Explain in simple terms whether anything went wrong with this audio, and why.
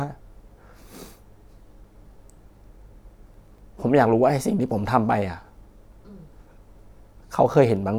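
From 3.34 to 3.59 s there is processor overload crackle. The computer fell behind on its very short audio chunks, each under a millisecond, and missed around ten of them over that stretch. Each gap was filled with a hard-edged scrap of old audio, heard as a brief gritty crackle.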